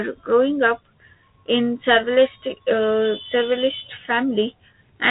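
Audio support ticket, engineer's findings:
No faults found; the speech sounds like a narrowband line through a 32 kbit/s G.726 path, with nothing above about 3.9 kHz and only light codec roughness, all as expected for that route.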